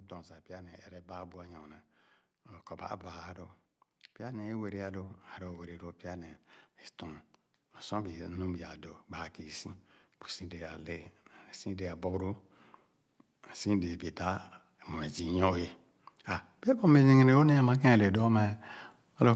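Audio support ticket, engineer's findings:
Automatic gain rising, 0.09–1.84 s (about 4 dB), 4.17–6.38 s (about 5 dB), 7.88–12.43 s (about 5 dB), 13.62 s to end: AGC boosting quiet input. Speech and background swell together gradually, not a sudden step. Band tops out near 8 kHz via Opus call path.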